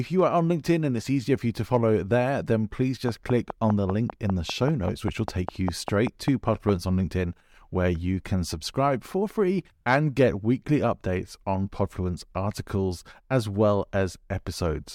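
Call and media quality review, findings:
Train of clicks, 3.09–6.70 s, just after "follow there then please". Regular ticking at 5 clicks per second, about twenty pulses of near-identical shape, peaking about 15 dB above the speech and audible in the gaps too. Likely cause: interference from nearby equipment or a faulty connection or power supply injecting a repeating pulse into the signal path.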